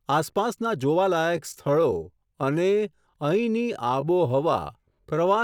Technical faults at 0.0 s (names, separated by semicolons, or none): none